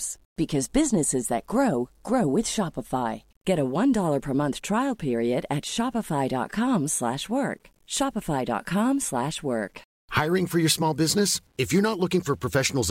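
Low bit depth without dither runs through the whole clip: the speech is likely quantised to about 9 bits by plain rounding, so the error tracks the signal, leaving a gritty, grainy texture roughly 45 dB down that thickens on quiet syllables.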